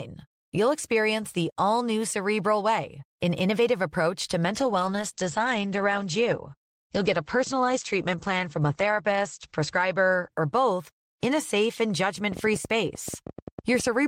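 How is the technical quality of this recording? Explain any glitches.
The recording has two clear faults: a stretch of reduced coding quality and, at the end, a run of clicks.

From 4.51 s, just after "an innovative approach to", the speech turns rough and muffled until about 11.37 s, clearing by "safe and". This is a call bitrate drop: the encoder's rate fell from 32 to 11 kbps, staying at its lowest for about 4.5 s, and the audio bandwidth shrank from 20 kHz to 8 kHz.

From 12.32 s, after "safe and", to the end of the clip, irregular ticking runs at about 11 clicks per second, peaking around 5 dB above the speech. This train of clicks is likely caused by interference, a faulty connection or a faulty power supply injecting repeated pulses.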